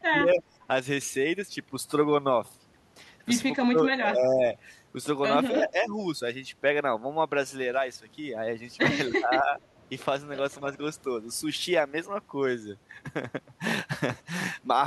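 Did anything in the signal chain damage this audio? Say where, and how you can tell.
Yes. The damage sits in the call processing stage. The speech level dips sharply at 0.09–0.64 s, 3.62–3.79 s, 3.99–4.42 s, 5.5–5.95 s and 9.08–9.52 s. Each dip is brief and recovers on its own. The level falls by roughly 10 to 20 dB. The pattern is likely speech suppressed in double talk. The echo canceller heard both ends at once, mistook this talker for loudspeaker echo, and turned the level down.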